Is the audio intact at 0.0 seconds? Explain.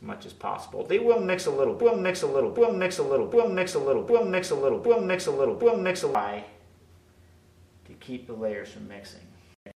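Yes, the audio is intact at 0.0 seconds, with no fault present at that moment.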